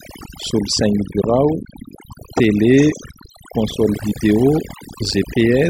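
Overdone noise removal runs through the whole speech recording: a noise reduction stage set too aggressively pulls individual frequency bands down whenever they sit near its noise estimate. Quiet parts of the voice vanish with the noise, leaving near-silent gaps with twinkling specks.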